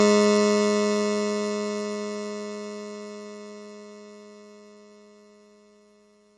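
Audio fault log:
Throughout: MP3 compression, likely from encoding at a very low bitrate near 32 kbps. The music has nothing above 11.2 kHz, and heavy damage from weak frequency lines being dropped and restored frame by frame leaves a watery, swirling texture with smeared attacks.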